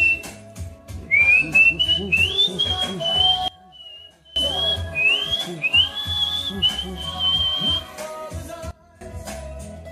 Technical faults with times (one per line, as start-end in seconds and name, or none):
3.48-4.36 sudden gain jump
8.71-9.01 sudden gain jump